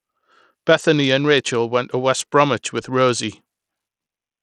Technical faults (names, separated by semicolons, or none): Bluetooth SBC compression